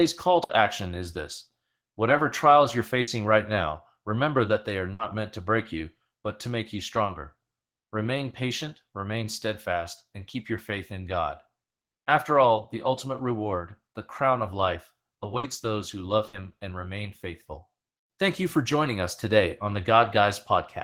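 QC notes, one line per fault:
0.43–0.52 s, 3.01–3.10 s, 4.93–5.02 s, 15.37–15.46 s, 16.27–16.36 s: burst of packet loss. Each time the last speech sound is held for about 60 ms and fades as a buzz or hiss, then the speech jumps ahead, skipping another 60 ms. Unlike a plain dropout, there is no silent gap, only the stretched fill and the skipped audio.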